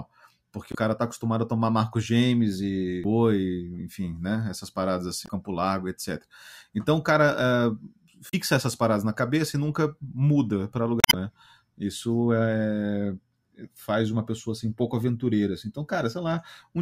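Speech in Portuguese is broken by five brief chirps or squawks, from 0.71 to 0.75 s just before "cara tá acostumado a", 3.01 to 3.05 s, 5.25 to 5.29 s, 8.29 to 8.34 s just before "essas paradas na cabeça", and a longer one from 10.99 to 11.14 s right after "e nunca muda para". These are damaged data in the compressed stream: corrupted bytes make the decoder misread frames and lose sync until it finds a valid frame header.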